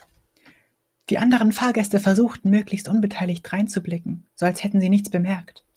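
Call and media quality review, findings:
No faults found in the speech signal, with level, timing and continuity holding steady across the whole clip.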